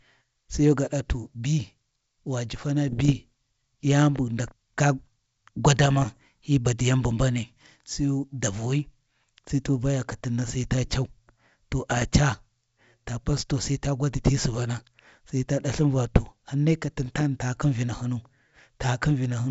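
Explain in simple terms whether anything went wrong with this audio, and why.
Four short patches of crackle and popping break into the speech, at 2.88 to 3.12 s, 5.83 to 6.17 s, 11.90 to 12.07 s and 17.02 to 17.23 s, each with a brief rough burst and a jump in loudness. These are bit errors on an ADPCM link, here the G.722 wideband phone path. A few bits got flipped in transit, which threw off the decoder's running estimate of the signal, so each glitch rings on briefly instead of vanishing instantly.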